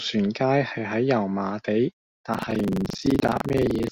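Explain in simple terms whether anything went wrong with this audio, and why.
Buffer tearing starts at 2.30 s and continues to the end, giving the speech a robotic rattle at about 23.4 Hz. The program filling the playback buffer and the sound hardware reading it have fallen out of step, so they cross partway through each cycle. About a fifth of every chunk then plays audio from roughly a tenth of a second earlier, with hard jumps on each side. The buzz rate fits a 2048-sample buffer.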